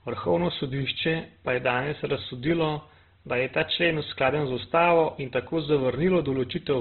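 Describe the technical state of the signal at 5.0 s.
At 5.0 s, as across the whole clip, the speech sounds rough, grainy and narrowband with nothing above about 4.1 kHz, likely Opus compression squeezing bands at roughly 12 kbps.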